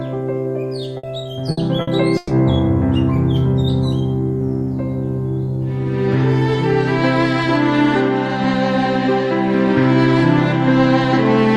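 Packets were lost in four bursts of packet loss, at 0.97 to 1.06 s, 1.51 to 1.60 s, 1.81 to 1.90 s and 2.17 to 2.32 s. Each time the receiver stretched the last sound into a fading buzz or hiss, for 60 ms in the first three bursts and 120 ms in the last. The audio then jumps ahead with that stretch gone.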